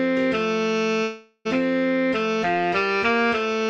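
At 1.03 s the audio breaks off and stays broken until 1.47 s. The gap sounds like a long network dropout. Over about 420 ms, no new sound arrives. The receiver fills about 416 ms of that by stretching the last sound into a fading buzz. Only a brief silence, about 30 ms, remains before the audio returns. The missing stretch is simply gone. The likely cause is a run of lost network packets.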